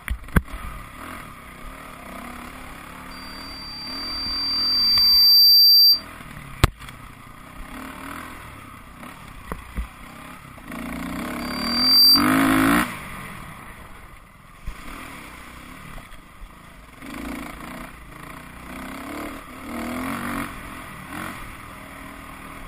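The audio carries a loudspeaker feedback squeal twice: from 3.11 to 6.05 s and from 11.40 to 12.28 s, both at 4.7 kHz. A microphone is hearing its own loudspeaker, and at that one frequency the loop gain exceeds unity, so the tone grows until it sits about 15 dB above the sound. It swells over roughly two seconds the first time and well under a second the second time. That swelling is what separates it from a steady interference whistle, which holds a constant level.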